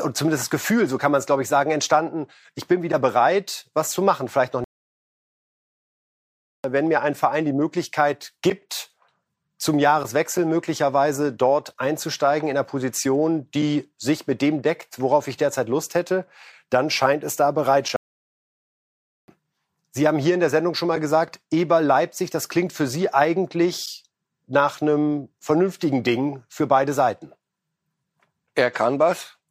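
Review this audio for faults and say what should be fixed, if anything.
Two playback stalls interrupt the speech. The first runs from 4.64 to 6.64 s, a 2.0 s silence, after which the sound resumes at "wenn mir ein". The second follows "dann scheint es da" and lasts from 17.96 to 19.28 s, about 1.3 s. In both, the audio cuts out mid-flow and picks up again, most likely because the player's buffer ran dry or its audio thread was blocked. Fix this by increasing buffering and keeping the playback thread free of blocking work.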